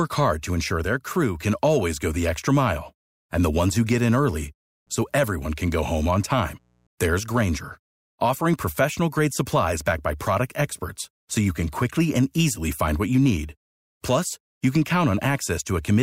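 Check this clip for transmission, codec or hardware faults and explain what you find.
One hardware fault is present: a burst of mains buzz.

Mains buzz runs from 4.87 to 6.87 s, starting just after "who get in early". Sharp switching spikes from a dimmer, rectifier or missing shield are getting into the signal path, arriving twice per cycle of the 60 Hz mains and building a dense ladder of harmonics that climbs into the kilohertz range. It sits roughly 40 dB below the speech, a faint but steady, raspy buzz under the talker for two seconds.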